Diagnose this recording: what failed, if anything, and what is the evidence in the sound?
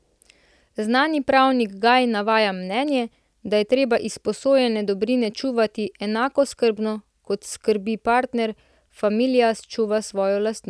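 Nothing failed; no fault is audible anywhere here.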